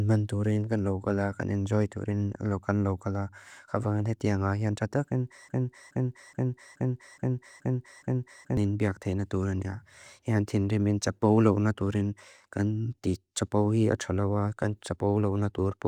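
At 5.49 s a broken-record loop sets in: one 0.42 s fragment of speech repeats seven times until 8.57 s, and the real continuation is lost. A stalled player or stream likely kept resending it. The waveform and spectrogram show identical blocks tiled at exact 0.42 s spacing.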